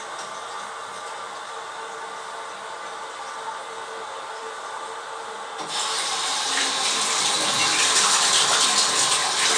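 Nothing technical goes wrong anywhere in this bit of audio, so there's simply nothing to point out.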